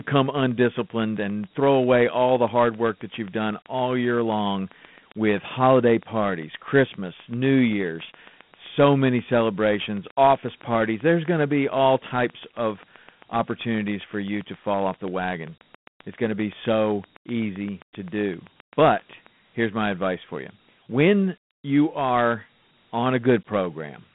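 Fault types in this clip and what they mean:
Dialogic VOX ADPCM, throughout: speech is coded as 4-bit adaptive differences at 32 kbps, which fits 8,000 samples a second. Quantisation leaves a plainly audible gritty hiss trailing the speech, within a telephone band of 150 Hz to 3.5 kHz, with nothing above 3.8 kHz.
Train of clicks, 0.01 to 19.28 s: regular, near-identical pulses at 7.63 per second, roughly 150 in all, peaking about as loud as the speech and ticking through pauses too. They stop just before "here's my advice for". Likely interference from nearby equipment or a faulty connection or power supply.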